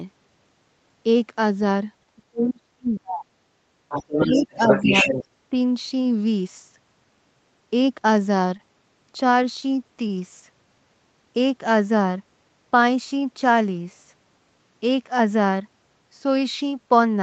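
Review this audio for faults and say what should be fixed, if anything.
Speech suppressed in double talk: the echo canceller, likely unable to tell the near talker from the loudspeaker echo while both sides spoke, turned the microphone down. The speech sinks deeply, by up to about 40 dB, across 2.16 to 3.3 s, then dips about 10 dB from 4.27 to 5.1 s and briefly at 5.5 s. Better double-talk detection, which holds the near talker open while the far end is active, would prevent it.

Other side's voice leaking through: the echo canceller likely failed to fully cancel the far-end voice played on the loudspeaker, so it reaches the microphone. From 3.89 to 5.25 s a second voice runs at roughly the same level as the talker. It overlaps the suppression dip. Stronger echo cancellation with a converged filter and residual echo suppression would prevent it.

Short stall from a late packet: a packet arrived after its playout time and the jitter buffer ran dry. 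The receiver held the previous sound for 19 ms, from 10.08 to 10.12 s, then resumed without losing anything. The result is a faint stretched hitch. A slightly deeper or more adaptive jitter buffer would prevent it.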